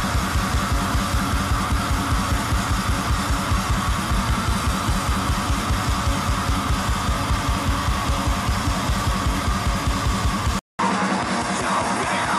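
At 10.59 s the audio drops out for 200 ms. From there to the end at 12.38 s it comes back narrower and slightly duller, with a new background noise sitting about 30 dB under the signal while the overall level holds steady. The likely cause is an input switched to a poorer device mid-recording. On a spectrogram the content above 11.4 kHz vanishes abruptly after a short blank gap. The waveform shows that brief flat gap and then a new noise floor between sounds.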